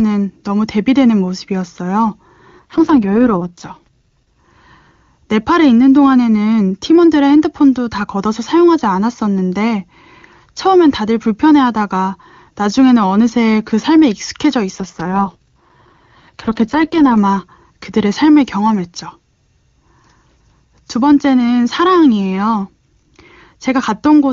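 Speech that turns rough and synthetic from 2.59 to 4.39 s and again from 14.75 to 17.17 s, with no gap or band loss: an AMR rate drop, consistent with the network pushing the HD Voice codec down from 23.85 to about 6.6 kbit/s.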